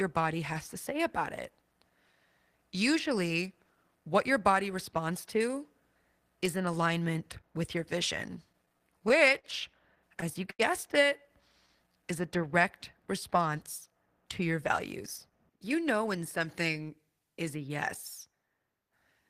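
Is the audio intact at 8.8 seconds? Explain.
No. From 8.31 to 9.46 s the speech shows repeated stalls (stutter): packets arrived late, the jitter buffer emptied eight times, and each gap, up to 44 ms, was bridged by extending the last sound. Nothing is lost, but the speech drags and stutters.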